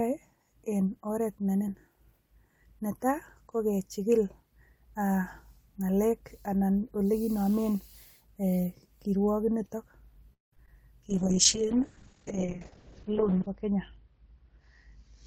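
Repeated stalls (stutter) hit this speech recording between 10.33 and 10.68 s: four breaks, the longest 189 ms, with about 62% of that span filled in. Late packets kept draining the jitter buffer, so the receiver stretched and faded the last sound until audio resumed. A call bitrate drop follows from 11.10 s to the end, where the sound turns coarse and muffled, with high frequencies cut off at 6 kHz instead of 20 kHz. The sound points to the encoder falling from around 32 kbps to roughly 7 kbps, bottoming out for about 2.4 s after the bandwidth estimate collapsed. Within that stretch, a jitter buffer speed-up from 13.40 to 15.03 s runs the audio at 105% speed with the pitch unchanged, trimming around 70 ms in small pitch-period slices to shed excess buffered delay, which gives it a hurried feel.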